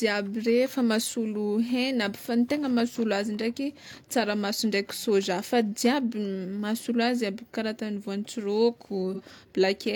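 Right near the end, from about 9.14 to 9.21 s, there's a brief AAC frame loss with concealment. The gap points to a single lost frame, about 43 ms of audio. The decoder papered over it by reusing the last good spectrum, so you hear a short smeared, noisy, phasey patch.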